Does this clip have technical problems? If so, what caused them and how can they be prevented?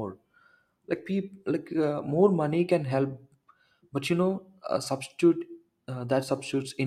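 Yes. Near the end of the speech, from 6.24 to 6.29 s, the level dips by about 6 dB for a brief 50 ms. That's the classic signature of one channel dropping out, likely from a flaky cable or connector, with the mono sum losing half its signal. Reseating or replacing the stereo cabling should stop it recurring.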